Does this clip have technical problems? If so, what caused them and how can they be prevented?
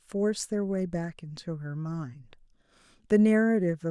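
No, no technical faults are audible in this speech clip, so there is nothing to trace to a cause or prevent.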